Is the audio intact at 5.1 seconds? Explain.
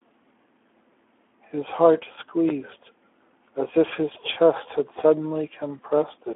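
No. The Speex codec damage runs through the whole clip. Too few excitation bits, fitting roughly 11 kbps, leave speech hoarse and noisy, band-limited to 300 Hz to 3.4 kHz.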